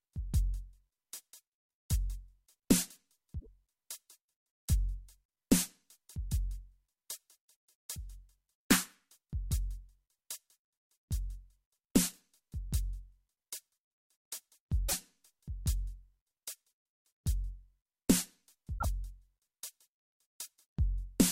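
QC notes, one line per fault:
3.36–3.47 s, 14.85–14.94 s and 18.74–18.85 s: damaged data in a compressed stream. Three short glitches, about 80 to 110 ms each, break into the music where corrupted bytes make the decoder misread frames and lose sync until it locks onto a valid header again. On a spectrogram each appears as a narrow vertical disturbance that breaks the surrounding harmonics. In the waveform it shows as a brief discontinuity.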